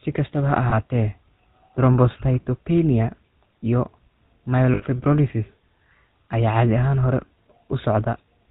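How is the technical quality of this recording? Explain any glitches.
The recording quality is poor throughout, with a constant codec coloration and two brief glitches.

The speech is band-limited and rough from start to finish, a sign of the GSM full-rate codec, consistent with its 13 kbps rate. The codec models the vocal tract as a filter and drives it with a sparse, regularly spaced pulse train, so much of the fine excitation is lost. Nothing above 4 kHz survives, and the damage is plainly audible as a buzzy, gravelly grain. This grain is what distinguishes it from a simple telephone-band filter, which dulls the sound without adding roughness.

There are lost GSM frames at 0.70 to 0.75 s, just after "kastaba ha", and again at 4.74 to 4.83 s. In each case the decoder covered a bad stretch by replaying the last good frame's parameters. The first sounds like a single 20 ms frame. The second suggests about four frames, or 80 ms. 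Both produce a short metallic, ringing smear rather than a clean gap of silence, which distinguishes them from an ordinary dropout.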